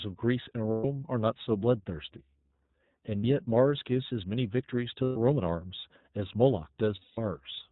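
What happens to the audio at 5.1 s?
At 5.1 s the speech hits a short dropout from lost iLBC frames. It runs from 5.03 to 5.17 s. Packets went missing, so the decoder had nothing new to play. It kept repeating the last pitch cycle, blended with noise. The gap sounds like a held, slightly buzzy vowel. Its length fits four lost 30 ms frames. Each iLBC frame decodes on its own, so the speech is back to normal right after 5.17 s.

The same moment also carries the iLBC codec heard through the whole clip. It is a narrowband VoIP codec, so nothing above 4 kHz gets through. It codes each frame's excitation separately. The coding damage is plainly audible. The speech sounds rough and somewhat synthetic. The sound fits the 13.33 kbps mode with 30 ms frames.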